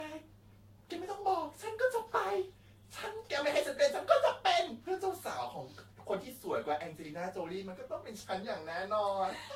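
Throughout, the speech shows generation loss: a swirly, hollow smear, blurred consonant attacks and nothing above 16.6 kHz. The likely cause is about five lossy passes, consistent with Vorbis near 59 kbit/s, each quantising on a shifted frame grid so noise and spectral holes accumulate.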